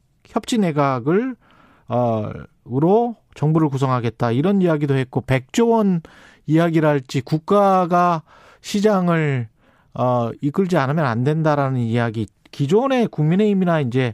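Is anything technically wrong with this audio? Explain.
No, no technical faults are audible.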